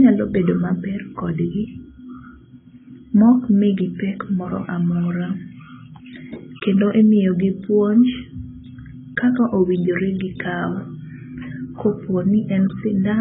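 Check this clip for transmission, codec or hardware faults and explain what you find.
The speech carries heavy AAC compression damage from start to finish. Nothing is present above 3.8 kHz, and the remaining band sounds dull and smeared, with a warbling, fizzy texture on sibilants and held sounds. The likely cause is AAC-LC coding at a very low bitrate, around 16 kbps, where the encoder lowers its cut-off and starves or noise-fills bands it cannot afford. A simple low-pass filter would dull the sound too, but it would not add that swirling, metallic texture.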